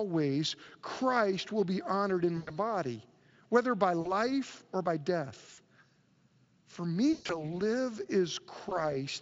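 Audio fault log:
2.37–2.52 s, 4.01–4.13 s, 5.53–5.59 s, 7.13–7.59 s, 8.69–8.85 s: VoIP packet loss concealed by the speech codec. The speech smears into a fading buzzy tone or coloured noise and stays weak briefly afterwards. The decoder extrapolates its last pitch and filter across 20 to 140 ms of missing audio. The first loss follows "will be honored in", and the longest is the scattered one near 7.1 s.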